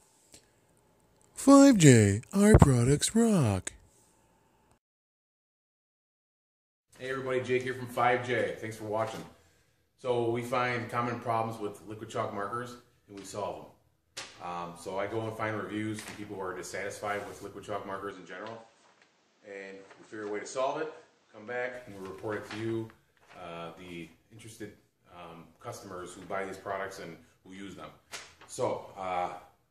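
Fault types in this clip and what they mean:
Input switched to a poorer device: From 18.11 to 21.74 s the sound turns duller and about 5 dB quieter, with a new, faint noise floor, likely a change to a lesser microphone. A spectrogram shows everything above 8.5 kHz cut off; the waveform shrinks, with no gap at the switch.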